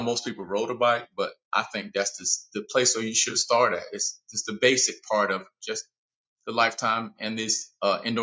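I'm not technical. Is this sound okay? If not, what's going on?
Yes, this sound is okay, and nothing is going wrong in it.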